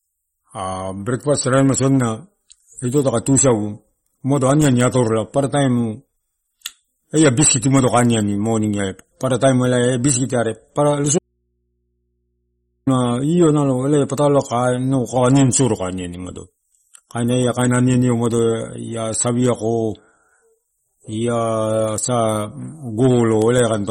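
Speech runs through the whole clip with a watery, swirly quality and smeared consonant attacks, likely from MP3 compression at a low bitrate, around 32 kbps. On a spectrogram everything above 15.9 kHz is blank, and the upper bands break into flickering, patchy blocks as weak frequency lines switch on and off. From 11.19 to 12.87 s the sound abruptly drops out for 1.68 s, leaving only mains hum roughly 50 dB below the speech. This is an audio dropout to a faint residue, likely a lost signal with the path after the break still live. The waveform shows a sharp-edged, nearly flat stretch, and the spectrogram shows only thin hum lines at the bottom.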